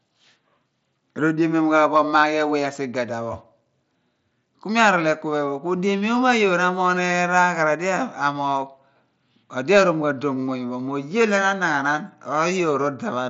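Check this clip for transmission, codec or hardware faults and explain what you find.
No faults turn up in the speech, which carries over an mSBC Bluetooth headset link with that codec's normal wideband ceiling, nothing above 7.7 kHz, and only the light graininess it leaves on louder sounds.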